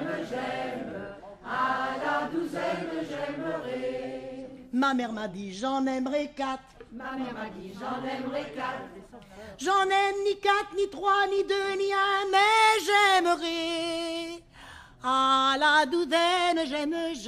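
No technical faults can be heard anywhere in this audio.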